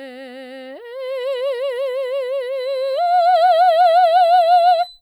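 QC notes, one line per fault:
2.5–5.01 s, feedback whistle. A thin, steady 4 kHz tone sits behind the music, some 25 dB below it. It swells and fades slowly in level. The likely cause is a speaker-to-microphone loop held at the edge of feedback, so it rings without building.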